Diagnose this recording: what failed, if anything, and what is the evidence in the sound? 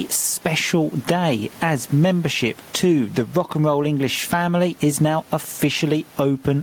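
Gain pumping runs through the whole speech recording. The room's background noise sits about 36 dB below the speech, and the gain is pulled down under each loud syllable, a level swing of around 15 dB, and the speech sounds squashed. The likely cause is input gain set far too high at the microphone stage, with a fast limiter or compressor in the processing chain clamping each peak. A noise gate would cut the gaps to silence instead of lifting them.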